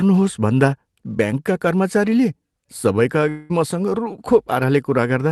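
A long network dropout hits this speech clip from 3.29 to 3.51 s, right after "भन्दा ब्याङ्कका कर्मचारीले सबैका". The likely cause is lost packets: the receiver fills about 200 ms by stretching the last sound into a fading buzz, and about 200 ms of the original audio never returns. The call path is consistent with Opus around 24 kbps and tops out near 12 kHz.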